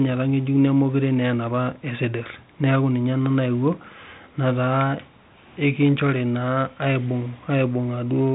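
No technical fault can be heard in the speech, which carries the band limit and light coding texture of G.726 ADPCM at 32 kbit/s, with nothing passing above about 3.9 kHz.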